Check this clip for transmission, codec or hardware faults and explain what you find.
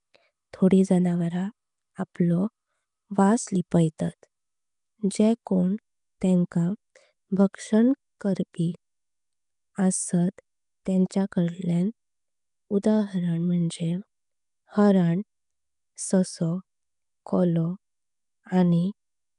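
Two faults are audible: codec damage across the whole recording and four short pre-echoes on sharp onsets.

Nellymoser compression, throughout: the rough, hissy halo, smeared underwater tone and empty band above 10.7 kHz point to the Flash-era Nellymoser Asao codec, likely at about 44 kbps. It codes short blocks with a fixed bit budget and fills unfunded bands with noise.

Pre-echo, at 2.14, 7.53, 10.85 and 11.10 s (the last just before "काडल्यांक उदाहरण"): each sharp attack falls late in a transform block. The block's quantisation noise, sized for the loud part, spreads about 10 to 12 ms earlier as a short hiss, softening the onset.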